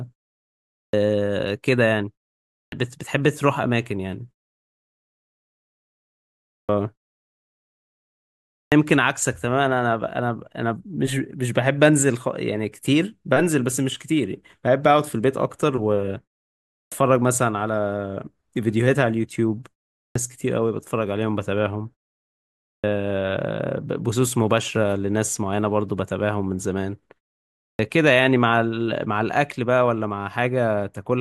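Clipped starts after a pause occur at 0.77, 2.56, 6.51, 8.53, 16.73, 19.99, 22.68 and 27.61 s. Each time, the output wakes too slowly and swallows about 160 to 190 ms of speech onset. Unlike simple muted pauses, the silence itself is clean, but the first sounds are actually lost.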